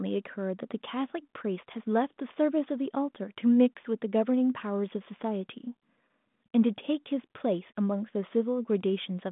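No technical faults can be heard anywhere in this speech.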